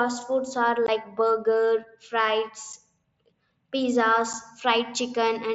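Voice packets between the headset and the phone were dropped with nothing filling the gap, which is unconcealed Bluetooth headset packet loss. The speech breaks off at 0.87 s for about 15 ms, a gap that fits two lost packets, and again at 2.73 s and 4.33 s for about 7.5 ms each. Each brief hole starts and stops abruptly, while the wideband mSBC link carries the rest with its light graininess.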